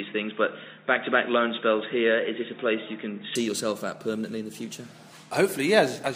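Until 3.35 s nothing passes above 3.8 kHz; the band then opens without a gap and the level shifts about 5 dB, likely an input switched to a poorer device.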